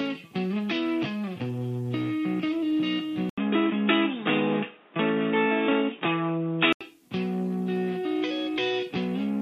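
From 3.3 to 6.8 s, after an 80 ms gap, the sound turns dull, with nothing above 3.8 kHz and new background noise, likely the input switched to a poorer device.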